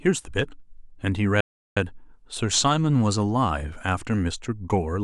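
At 1.41 s the speech cuts out in mid-flow and stays silent until 1.77 s, a gap of about 359 ms, then resumes. This is a playback stall, likely caused by the player running short of buffered data or having its output thread blocked.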